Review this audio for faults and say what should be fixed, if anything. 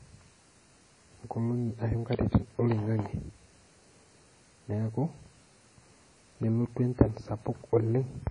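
Throughout the speech, nothing sounds above 10.1 kHz, and two different kinds of codec smearing overlap. This is likely transcoding between lossy codecs, fitting a low-bitrate WMA source re-encoded as MP3. To prevent it, encode once from the original uncompressed master instead of converting one lossy file into another.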